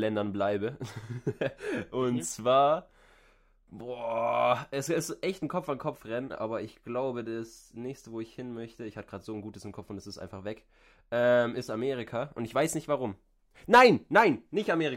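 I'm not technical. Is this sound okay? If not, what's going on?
Yes, nothing in this speech recording sounds wrong.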